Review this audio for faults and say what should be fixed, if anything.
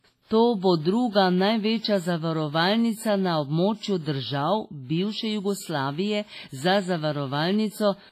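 Heavy WMA compression runs throughout the speech, likely from an encode at about 24 kbps. It causes washy ringing, nothing above 15.5 kHz, and hiss that rises and falls with the signal rather than staying steady like background noise. To prevent this, export at a higher bitrate or keep a lossless master.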